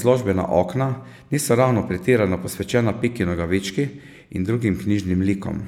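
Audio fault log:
Nothing to log here; I didn't hear a single fault anywhere in this bit of speech.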